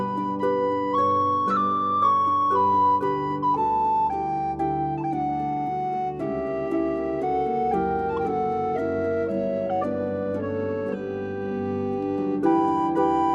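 No technical faults are audible anywhere in the recording.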